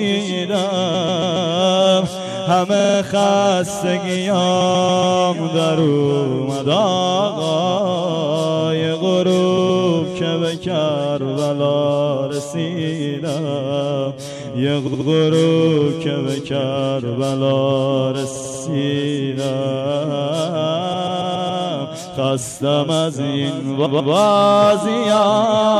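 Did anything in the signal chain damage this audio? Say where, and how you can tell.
Yes. Repeated frames occur at 0.93, 2.79, 4.60, 9.57, 14.86, 18.35, 20.92 and 23.85 s. Blocks of 46 to 139 ms replay two to five extra times, causing a stutter. Compressed frames were duplicated in the codec or storage stage, lengthening the audio.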